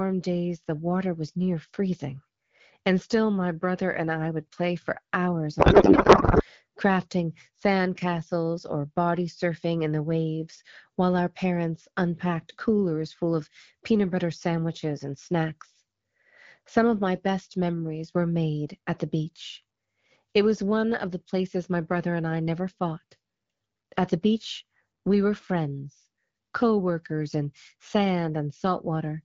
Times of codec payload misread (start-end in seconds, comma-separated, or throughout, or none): 5.59-6.44